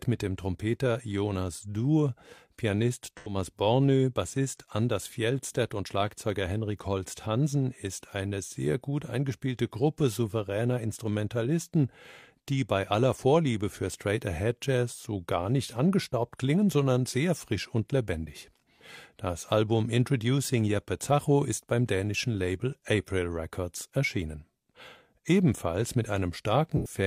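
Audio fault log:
3.17–3.35 s and 26.77–26.96 s: AAC frame loss with concealment. Each time, about 85 ms of coded audio went missing, which fits two lost frames, and the decoder covered the gap by re-using the last good spectrum with randomised phase and smoothed energy. Because the patch is rebuilt from stale spectral content, the speech there turns briefly smeared and noisy, with a hollow, phasey quality. The gap is too short for the fill to fade into silence.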